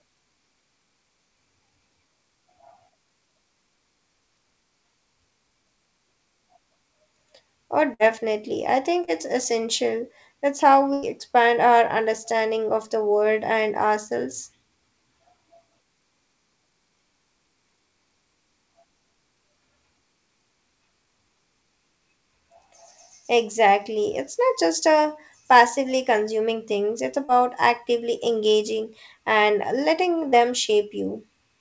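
At 7.94 to 8.02 s, a burst of packet loss drops about 60 ms. The receiver extends the last sound for about 54 ms, fading it into a held buzz or hiss, then skips ahead. At 9.04 to 9.10 s, just after "I think", short concealed packet loss fills a roughly 30 ms hole with continued sound, leaving a brief smear. At 10.93 to 11.05 s, just before "expand our understanding of", a longer burst loses about 90 ms, concealed for 89 ms as a fading continuation before audio resumes further on. Short concealed packet loss recurs at 27.25 to 27.31 s, between "passively consuming things it's" and "actively engaging and", and at 30.29 to 30.35 s. Each loses about 30 ms and is heard as a quick smear or wobble. Across the call path, nothing reaches above 8 kHz, which fits a 64 kbps G.722 stream.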